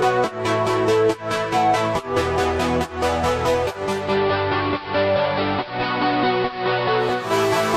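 From 3.76 s to 7.40 s, hiss rises about 20 dB below the signal: digital radio blending to analogue AM over 432 ms.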